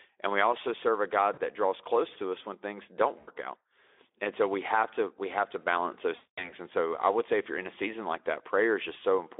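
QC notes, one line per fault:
1.33–1.41 s, 3.19–3.30 s, 6.15–6.54 s: VoIP packet loss concealed by the speech codec. After "we also serve a", "us when things don't" and "we have to balance", the audio smears into a buzzy tone or coloured noise that fades. The decoder stretched its last pitch over gaps of 40, 80 and 220 ms, and the longest gap fits about eleven 20 ms frames. The narrowband Speex line carries this tone.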